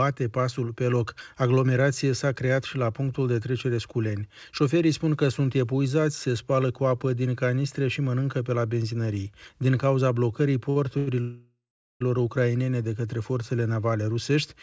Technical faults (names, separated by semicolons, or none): short stall from a late packet; call audio freeze